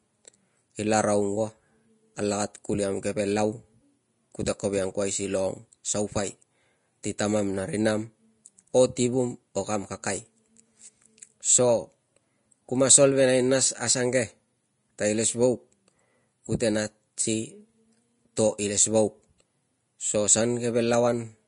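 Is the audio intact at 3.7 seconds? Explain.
No. At 3.7 seconds the speech carries damage that runs through the whole clip, and the likely cause is Vorbis compression. Nothing sounds above 10.5 kHz, so the top end is cut away. Below that, the treble is quantised so coarsely that fine detail turns into noise of similar energy. The speech sounds hissy and grainy, with roughened tones and smeared attacks. The damage is plainly audible and fits a low bitrate of about 33 kbps.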